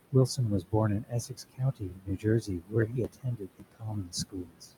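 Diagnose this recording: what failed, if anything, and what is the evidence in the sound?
The background pumps and flutters throughout, sinking by about 21 dB between phrases and surging back underneath them. This is noise suppressor artifacts at the call-processing stage: per-band gain is pulled down frame by frame wherever the processor judges the room noise (about 15 dB below the speech) to be steady.

Parts of the speech itself sound swallowed or faint: briefly from 0.61 to 0.74 s, then repeatedly from 1.0 to 4.67 s, roughly two seconds in total, dropping by up to about 22 dB. This is speech cut by the noise suppressor. The same call-processing stage misjudged soft consonants and quiet stretches as noise and attenuated them along with the background.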